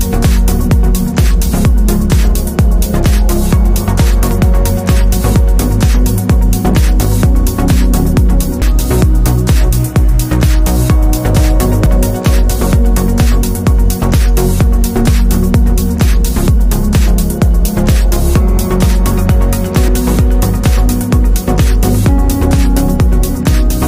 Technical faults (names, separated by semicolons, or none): dropped buffer (overrun)